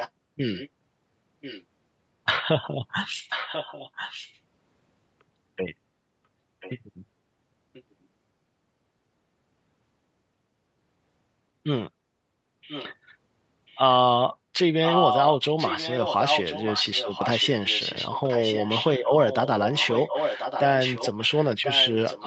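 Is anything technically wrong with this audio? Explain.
Yes. A delayed second copy of the speech trails the main sound at 0.0–0.69 s, 1.41–1.64 s, 3.29–4.39 s, 6.6–6.8 s, 7.73–7.83 s, 12.68–12.95 s and 13.67–13.78 s. From 14.84 s it runs continuously to the end, nearly as loud as the speech itself. In the earlier scraps it sits well below the speech, at times barely audible. Each copy lags by about 1.04 s. This is echo leak, likely from a loudspeaker on the other end of the call whose echo canceller let part of the microphone pickup through.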